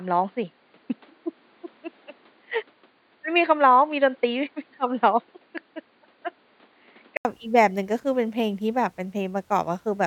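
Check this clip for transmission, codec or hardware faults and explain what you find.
One fault. From 0.0 to 7.25 s the speech is dull and boxy, likely an input switched to a poorer device: nothing above 4.7 kHz, about 5 dB quieter, with a faint added noise floor. A spectrogram shows a flat ceiling, then an 80 ms waveform gap before full bandwidth returns.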